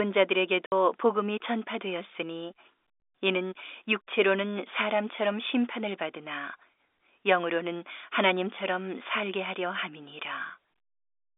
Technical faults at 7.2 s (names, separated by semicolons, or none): none